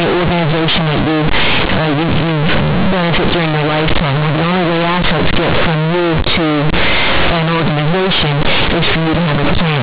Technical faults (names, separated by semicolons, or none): companded audio read as linear